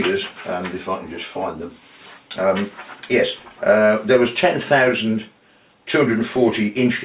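No technical faults are audible in this audio.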